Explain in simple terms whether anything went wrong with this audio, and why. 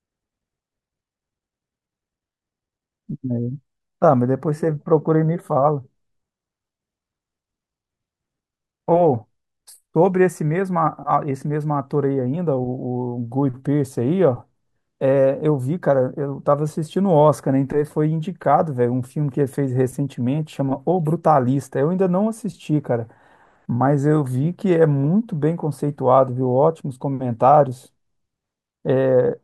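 Nothing went wrong here: the recording comes through without any technical faults, with no dropouts, glitches or distortion heard at any point.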